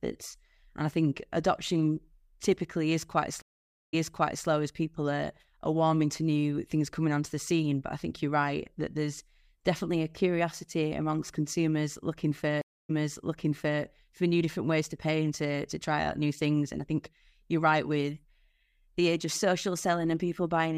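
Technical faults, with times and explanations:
3.42–4.46 s and 12.61–13.82 s, stream reconnect: the connection drops and the audio goes silent for about 0.51 s, then 0.28 s. When it comes back on a fresh decoder, it picks up 0.53 s and 0.93 s earlier, so you hear a stretch repeated.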